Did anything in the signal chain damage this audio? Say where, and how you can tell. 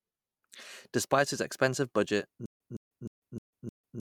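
Yes. From 2.46 s to the end there is a stutter with silent gaps. A 163 ms burst repeats every 308 ms, with digital silence between. This is likely a stalled playback buffer replaying its last fragment.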